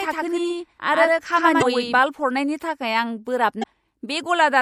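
Short speech recording, and the whole thing has that watery, swirly coding sound with dulled treble and smeared consonant onsets. That's most likely MP3 compression, and plainly audible. The encoder was starved for bits, which fits a bitrate around 64 kbps, so it chopped off the top end and let weak frequency lines flicker in and out from frame to frame. On top of that, from the very start until about 1.99 s there's a doubled audio track: a second full-band copy trailing roughly a tenth of a second behind, at about the same level as the original. It has no reverb tail or room colour, which points to the sound likely getting captured twice through a slower path or an edit leaving two out-of-step copies. At 1.99 s the copy just stops dead. Then there are two short glitches, at 1.58 to 1.63 s and 3.59 to 3.64 s. Those are damaged data in the compressed stream: some frames got corrupted, so the decoder choked on them, lost sync and hunted for the next frame header.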